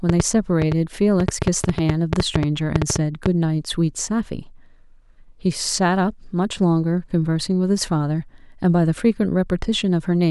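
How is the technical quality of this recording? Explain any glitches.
The recording has one clear technical fault, confined to its opening few seconds.

A train of clicks runs from 0.09 s to 3.27 s: about twenty sharp pulses, arriving at roughly 6.3 per second but unevenly spaced. Their similar shape points to a repeating electrical or interface disturbance, likely interference from nearby equipment or a faulty connection or power supply. They are heard as a ragged ticking laid over the speech and in its gaps, peaking around 15 dB above the speech level.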